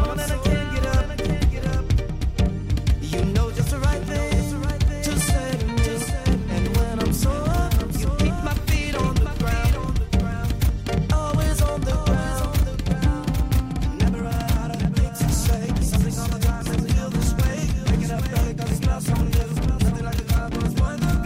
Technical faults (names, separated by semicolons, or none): doubled audio track